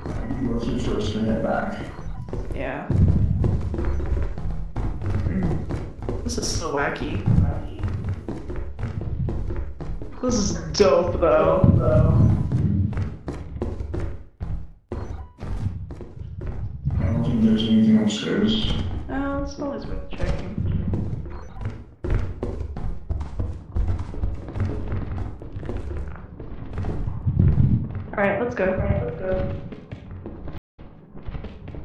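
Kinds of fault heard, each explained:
Stream reconnect: the connection dropped, and the player had to reconnect and spin up a fresh decoder mid-stream. Right near the end, from about 30.58 to 30.80 s, the sound cuts out to silence for 200 ms. When it comes back, it has jumped ahead by roughly a fifth of a second, so that bit of material is skipped rather than just delayed. That's typical of a live stream rejoining at wherever it currently is.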